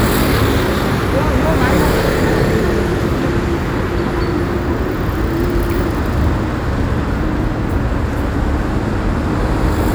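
A recording of sounds that turns harsh and buzzy from 1.45 to 2.20 s, with a gritty noise floor at around -35 dBFS riding under quiet moments. That's likely a stuck bit, one data line pinned high or low, knocking roughly half the samples off.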